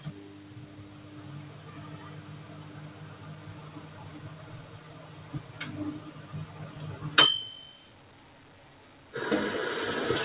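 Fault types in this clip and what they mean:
Noise suppressor applied to music or sounds: A speech-oriented suppressor treats steady parts of these sounds as noise and pulls them down by about 20 dB, so sustains and tails sink while onsets survive. A spectrogram shows flickering, gated energy between attacks, and the waveform envelope pumps.
Skip ahead: At about 3.52 s playback jumps forward with no gap, dropping roughly 0.7 s of audio and splicing the two sides almost directly. The waveform shows an abrupt join with no silence, and the spectrogram shows an instant change in content.
Jitter buffer speed-up: From 5.45 to 6.67 s the receiver trims short pitch-period pieces repeatedly, removing around 150 ms to run at 111% speed with unchanged pitch. Events arrive hurried; the spectrogram shows compressed timing, and the waveform shows tiny repeated splice points.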